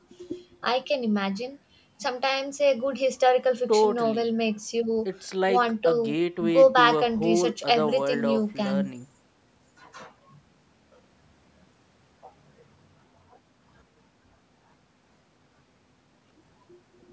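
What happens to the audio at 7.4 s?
Nothing goes wrong at 7.4 s; the speech carries on intact through that moment, with only the ordinary call microphone processing trimming the lowest bass and leaving nothing above 8 kHz.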